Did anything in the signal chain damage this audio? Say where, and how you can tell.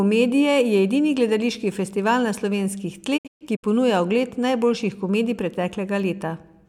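Yes. Digital broadcast dropout at the reception and decoding stage: from 3.16 to 3.65 s the speech fades to silence in several short holes, the longest 128 ms and 256 ms gone in total, which fits about eight lost 32 ms frames. The receiver muted with 20 ms fades rather than patching the gaps as packet-loss concealment would.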